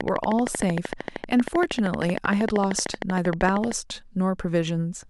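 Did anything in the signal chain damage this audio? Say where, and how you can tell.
Yes: a regular train of clicks, 12.9 per second, ticks over the speech from 0.01 to 3.73 s, peaking about 15 dB above it, likely interference in analogue wiring.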